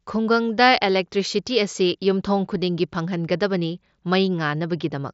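No technical faults can be heard in this speech.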